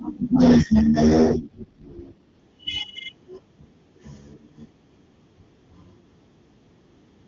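An AMR rate drop runs from 0.38 s to 2.40 s. Across that stretch the speech turns coarser and more synthetic, with a raspy, buzzy edge. The audio band stays just as wide and nothing drops out. The change fits the link forcing the AMR-WB coder down from its top rate to around 8.85 kbit/s, giving bits over to error protection. Once the higher rate returns, the speech goes back to the clear HD Voice quality heard before and after.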